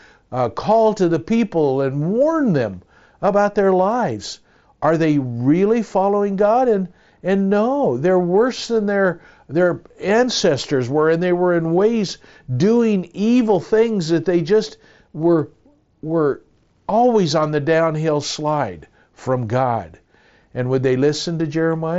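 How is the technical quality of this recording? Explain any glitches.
No glitches to explain: the speech arrives over a Bluetooth mSBC headset link, so the band stops near 7.7 kHz, and nothing in the recording departs from what that path delivers.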